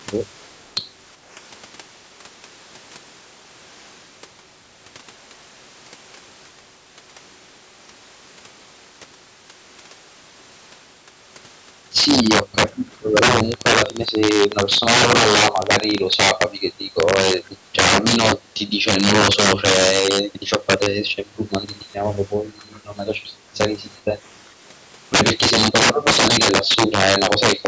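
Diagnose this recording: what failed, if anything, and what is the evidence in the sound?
Integer overflow runs through the whole speech recording and sits in the sample-format conversion or gain stage. The loudest peaks, driven about 14 dB past full scale, don't flatten as clipping would. They wrap to the opposite sign and jump across the full range. A few percent of samples are affected, and each one is a harsh crack on the loud syllables, sharper and more violent than ordinary clipping.

An echo leak appears as two brief, faint scraps: 12.92 to 12.96 s and 22.73 to 22.8 s. Both trail the speech by 398 ms, and both sit very far below the talker, somewhat more audible the second time. This is a call-processing fault, most likely a far end playing the call on a loudspeaker while its echo canceller lets residual pickup through and sends it back up the line.

A train of clicks runs from 13.52 to 15.99 s. 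Around forty similar pulses arrive at roughly 16.3 per second but unevenly spaced. They stand well above the speech and tick through the pauses as well as over the speech. Their near-identical shape and independence from the signal point to the analogue or interface side, likely nearby equipment interference or a faulty connection or power supply.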